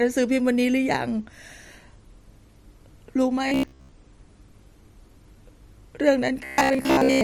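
From 3.48 to 3.92 s, and again from 6.45 to 7.23 s, the speech collapses into robotic sound from repeated short buffers: a rigid metallic buzz near 66.8 Hz that only loosely tracks the words. The likely cause is audio arriving too seldom, so a segment of about 15 ms is looped in place of most of the real signal. A spectrogram shows flat, evenly spaced harmonics at 66.8 Hz intervals, and the waveform shows identical cycles repeating.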